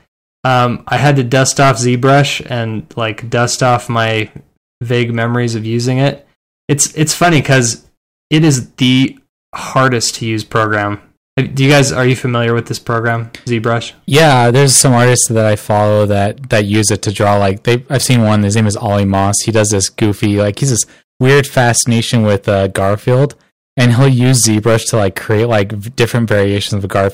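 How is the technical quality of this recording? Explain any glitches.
Quality is poor: the speech is hard clipped throughout, driven about 16 dB past full scale so roughly one sample in twenty is cut flat, giving harsh fuzz on every loud syllable. Unlike gentle saturation, the flat tops spray high harmonics abruptly.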